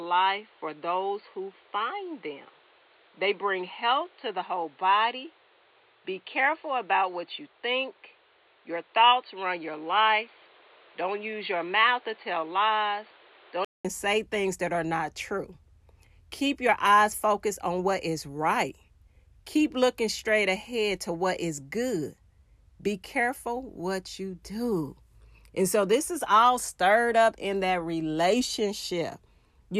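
The system likely had its input switched to a poorer device for the opening stretch, from the start to 13.85 s, before changing back to the better input. Until then the speech is band-limited, with nothing above 4.5 kHz, so it sounds dull and boxy, carrying a background noise roughly 30 dB under the speech. At the switch a short gap of about 200 ms falls, and the full, clearer sound returns with "say things that are", at much the same level.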